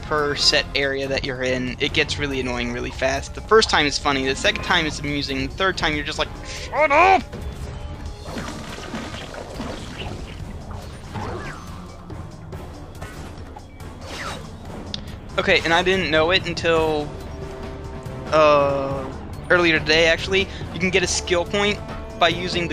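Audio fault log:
No fault is found anywhere in the audio.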